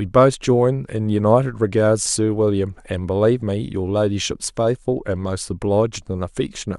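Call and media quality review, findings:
Short glitches at 2.05 s and 4.30 s, each gone in under 20 ms. Looks like damaged data in the compressed stream. Corrupt bytes hit the decoder, it misreads those frames, loses sync and glitches briefly while hunting for the next valid frame header.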